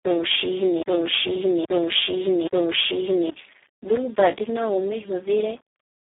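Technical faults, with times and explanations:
Throughout, low bit depth without dither: a grainy distortion rides on the speech and changes with it, roughening quiet passages rather than sitting underneath as a steady hiss. Because the error tracks the waveform, it sounds like grit instead of noise. The likely cause is the signal being rounded to very few levels with no dither, which fits an 8-bit resolution. The resulting error sits only around 35 dB below the speech.
Throughout, Speex codec: the speech is hoarse, buzzy and close to robotic. The codec is heavily damaged at a very low rate, pointing to about 4 kbps near the bottom of its range, where too few bits describe the excitation and the result approaches a vocoder. The band is confined to telephone-like limits of roughly 300 Hz to 3.5 kHz. Nothing is audible above 3.7 kHz, so the speech sounds thin and boxed in.
0.00 to 3.30 s, broken-record loop: the clip opens with the loop already under way. 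A fragment of about 0.82 s plays and then repeats three times, back to back and identically, before normal playback resumes. The likely cause is a stall in the player, encoder or stream that kept resending the last piece it held. Any speech that should have filled those seconds is missing, replaced by the same repeating chunk.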